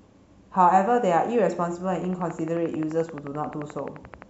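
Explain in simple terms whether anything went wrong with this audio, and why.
From 1.96 s to 4.23 s the speech is overlaid by a train of clicks: a steady ticking at about 11.5 clicks per second, evenly spaced, around thirty in all. Each click is a short, sharp pulse of much the same shape, loud enough to stand out above the speech and clearly audible in the gaps between sounds. A regular pulse like this most likely comes from electrical interference from nearby equipment or a faulty connection or power supply.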